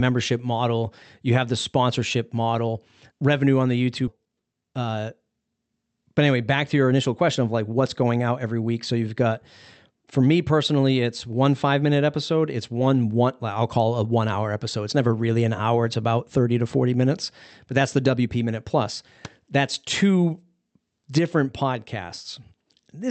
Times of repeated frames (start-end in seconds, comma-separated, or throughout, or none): none